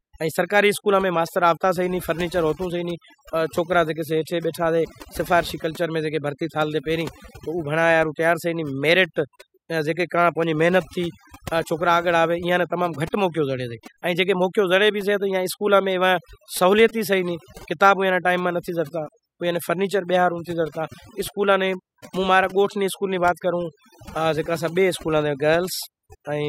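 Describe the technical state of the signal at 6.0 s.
At 6.0 s the speech is affected by overdone noise removal, which runs through the entire clip rather than just this moment. A noise reduction stage set far too aggressively is gating individual frequency bands down or out whenever they sit close to its noise estimate, taking the quieter parts of the voice along with the noise. The result here is a background that drops and breaks up into scattered twinkling, warbling specks.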